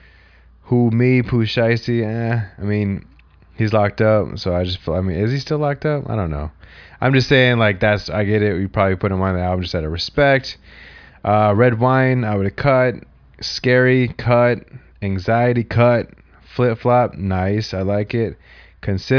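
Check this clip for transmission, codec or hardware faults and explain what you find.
No faults turn up anywhere in the recording.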